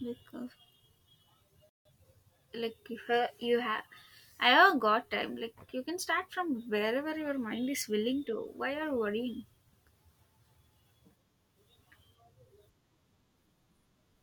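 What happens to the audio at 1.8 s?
At 1.8 s the speech falls silent in a playback stall from 1.69 to 1.85 s, about 160 ms, likely because the player ran out of data. A time-compressed catch-up follows from 1.85 to 1.99 s, with the speech hurried to double speed by cutting and cross-fading small pieces. Pitch stays normal, unlike a sped-up tape.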